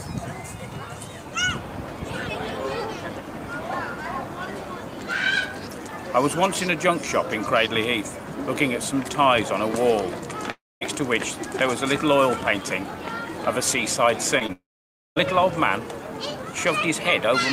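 At 10.51 to 10.83 s the sound gives way to a fading buzz and then roughly 0.23 s of near-silence, likely a long network dropout that left about 0.3 s of audio missing. On a spectrogram it shows as the continued sound fading into a blank band. The waveform collapses to a flat line before the sound resumes.

At 14.39 s and 14.46 s, two brief smears, each lasting about 20 ms, mark short concealed packet loss. The receiver bridged each gap by extending the preceding sound. These show as slightly blurred vertical slivers on the spectrogram.

At 14.52 to 15.18 s a second stretch, likely another long network dropout, loses about 0.64 s. A fading tail is followed by about 0.54 s of flat, empty signal before the sound returns.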